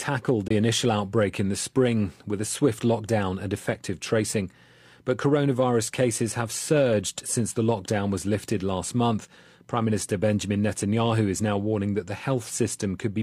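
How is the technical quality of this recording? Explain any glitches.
The speech has one glitch near the start. At 0.48 to 0.51 s, a Bluetooth dropout likely lost one packet, leaving a 21 ms silence before the sound resumes further along.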